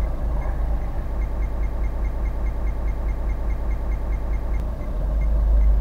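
From 1.26 s to 4.60 s the audio falls into a broken-record loop: one 208 ms fragment repeats exactly 16 times, likely a stalled stream. Unlike echo, nothing decays or overlaps, and the missing audio never returns.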